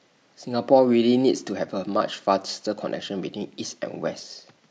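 No technical faults can be heard, so there is nothing to describe in time order.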